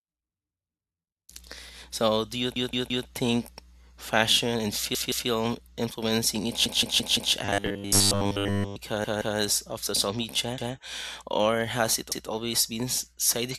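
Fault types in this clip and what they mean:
Repeated buffer: The same stretch of speech plays again because fresh audio did not reach the device in time. Each repeated piece lasts about 171 ms, which fits an 8192-sample buffer. The stutters start at 2.56, 4.95, 6.66, 9.05, 10.58 and 12.12 s. Each piece sounds two to five times in a row, with a hard join at every restart. Little or no speech goes missing, so the effect is a delay with a stammer.
Robotic sound from repeated short buffers: From 7.45 to 8.76 s the speech turns into a stiff, metallic buzz. It roughly follows the words, but it carries a steady buzz at 100 Hz. That pitch matches a 10 ms fragment being looped. The likely cause is audio arriving too seldom, so software keeps repeating the last short piece. Most of the sound in that span is repeated, and the real audio between the repeats is dropped.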